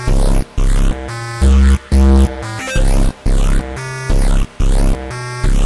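No faults found; the clip is clean throughout with nothing to flag.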